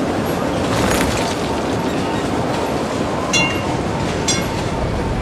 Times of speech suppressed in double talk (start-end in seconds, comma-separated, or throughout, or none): none